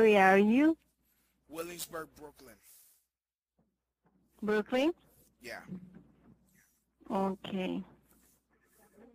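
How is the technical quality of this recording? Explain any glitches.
No technical glitches can be heard in this recording.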